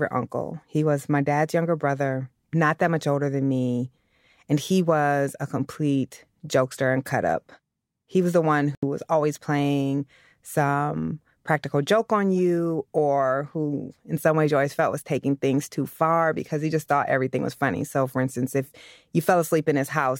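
From 8.75 to 8.84 s, between "was the one" and "was always playing some", the speech drops to silence and resumes further on, likely a Bluetooth dropout from late, discarded packets.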